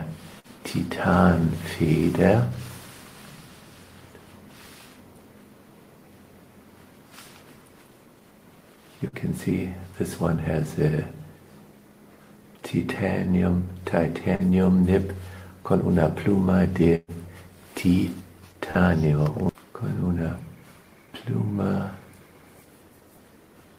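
Three bursts of packet loss break up the audio at 0.39–0.47 s, 9.08–9.15 s and 16.95–17.18 s. In each, the receiver stretches the last sound and fades it, then jumps ahead past the missing part. The first two each lose about 40 ms. The third loses 120 ms and decays into a stretch of near silence, which marks it as the most severe. Short concealed packet loss at 14.35–14.42 s, 18.71–18.78 s and 19.51–19.58 s is different: each gap is also about 40 ms, but the patch blends back into the real audio, leaving only a brief smear or wobble rather than an audible jump.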